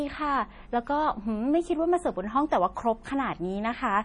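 From start to finish the speech has that watery, swirly quality, with nothing at all above 10.6 kHz. That's likely MP3 compression, and heavy compression at that. The encoder ran short of bits, chopped the treble at a fixed point, and kept dropping quiet frequency detail that flickers in and out from frame to frame. The damage is severe enough to fit a low bitrate around 32 kbps, so the s sounds come out chirpy and metallic, and the attacks are smeared.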